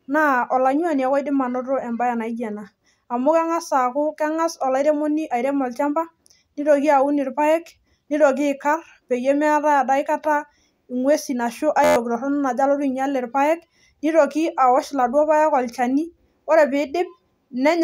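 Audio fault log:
11.84–11.96 s, system hang loop: the computer or audio driver stalled while the playback hardware kept reading the same stretch of its ring buffer, replaying a segment of about 11.61 ms ten times in a row, which fits a 512-sample buffer. Because each pass is so short, the repeats fuse into a steady buzz at about 86.1 Hz rather than a stutter, and roughly a tenth of a second of the speech is lost beneath it.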